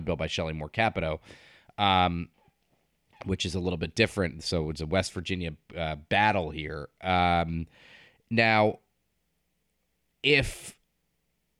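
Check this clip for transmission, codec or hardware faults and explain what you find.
No faults turn up anywhere in this speech recording. There is nothing to point to and no moment that needs a timestamp.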